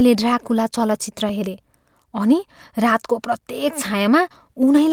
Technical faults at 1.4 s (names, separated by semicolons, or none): clock drift between sender and receiver; repeated timing corrections